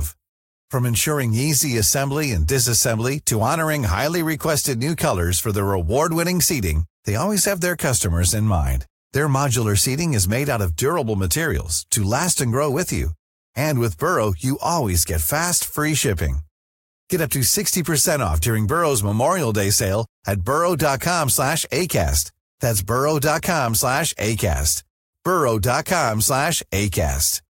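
No audible technical faults.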